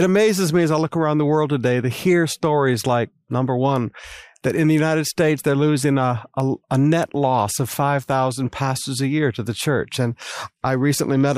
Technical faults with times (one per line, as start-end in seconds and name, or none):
none